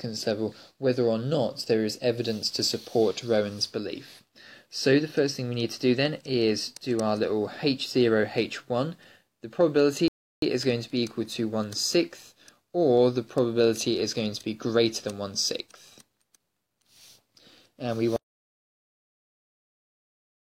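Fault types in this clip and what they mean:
Rebuffering stall: the player runs out of buffered audio and waits for more, so the sound halts at 10.08 s and picks up at 10.42 s exactly where it stopped. Unlike a dropout, nothing is missing; about 0.34 s of silence is simply inserted.
Audio dropout to silence: from 18.16 s to the end the signal falls to silence with no room tone, likely because the input was lost while recording continued. Unlike a stall, the sound never resumes from where it stopped, so whatever followed is gone.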